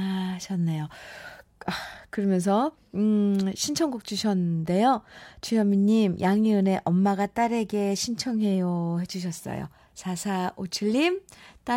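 No technical faults can be heard anywhere in the recording; the signal stays intact and continuous for its whole duration.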